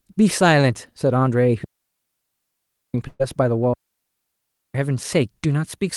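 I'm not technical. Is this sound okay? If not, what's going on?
No. The speech cuts to near silence twice, from 1.64 to 2.94 s and from 3.74 to 4.75 s, with no crackle around either gap. That is a digital wireless dropout: the wireless link lost too much data, so the receiver muted.

Between those gaps, from 3.07 to 3.21 s, the last sound is stretched into a brief fading buzz or hiss, then speech picks up slightly later. That is a burst of packet loss: about 120 ms of audio was lost or came too late to play and is simply missing.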